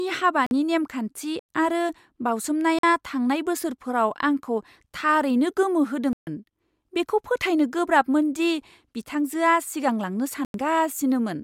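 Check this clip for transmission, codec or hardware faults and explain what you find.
Yes, the speech drops out five times. Blocks of digital silence sit at 0.46–0.51, 1.39–1.49, 2.79–2.83, 6.13–6.27 and 10.45–10.54 s, lasting about 46, 93 or 139 ms. The lengths are multiples of roughly 46 ms, which fits 2048-sample buffers the program didn't fill in time, so zeros went out instead. Each gap is a short hole. A waveform shows flat silence, and a spectrogram shows blank columns.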